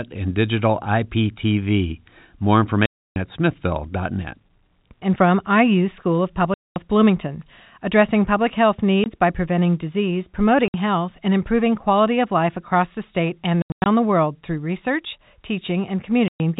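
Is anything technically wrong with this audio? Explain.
Yes, there is packet loss filled with silence. Packets went missing and the receiver inserted digital silence instead of concealing the gap. This cut dropouts into the speech at 2.86–3.16 s (300 ms), 6.54–6.76 s (220 ms), 9.04–9.06 s between "addressing public health" and "by preventing disease" (20 ms), 10.68–10.74 s before "health and improving quality" (60 ms), and 16.28–16.40 s (120 ms). Between 13.62 and 13.86 s, after "across the state and", the loss is scattered: 200 ms of silence broken into pieces, the longest 100 ms. Every gap is a multiple of 20 ms, which suggests 20 ms packets. The speech stops dead and restarts with hard edges. The narrowband G.711 telephone coding keeps everything below 4 kHz.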